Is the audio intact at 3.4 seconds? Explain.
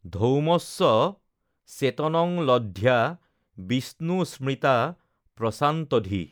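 Yes, at 3.4 seconds the speech runs through intact, with no fault to be heard at that moment.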